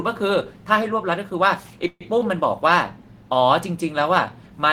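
At 1.87 s the speech hangs for about 150 ms in a call audio freeze: the last sound smears into a fading buzz, drops to silence for about 30 ms, then picks up exactly where it stopped. It's likely a jitter buffer running dry while packets were delayed. Nothing's lost, but everything after lands about 132 ms later.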